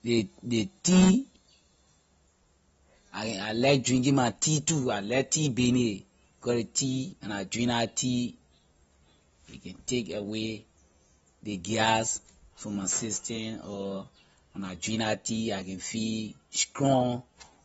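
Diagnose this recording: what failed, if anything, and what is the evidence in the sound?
The failure sits at the codec stage. Throughout the speech there is nothing above about 7.6 kHz, and the damage is plainly audible as a dull, smeared top end with a watery, fizzy texture on sibilants and held sounds. The cause is likely AAC compression, specifically AAC-LC at a low bitrate consistent with about 24 kbps. At that rate the encoder lowers its cut-off and starves the upper bands of bits, leaving spectral holes that warble from frame to frame.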